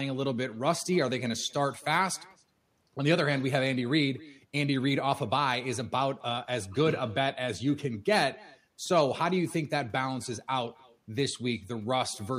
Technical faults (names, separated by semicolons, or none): echo with no canceller